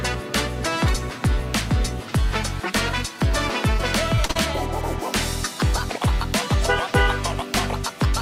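Around 4.15 to 4.19 s, then 4.25 to 4.31 s and straight on to 4.37 s, short concealed packet loss occurs. About 20 ms, then two 40 ms stretches, failed to arrive in time, and the decoder filled each gap by extending the preceding sound before blending back. It is heard as a quick smeared wobble.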